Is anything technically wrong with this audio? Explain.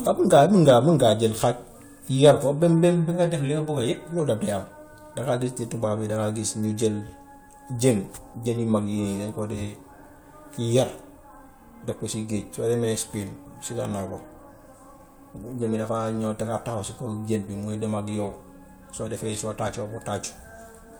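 No, nothing is technically wrong with this audio.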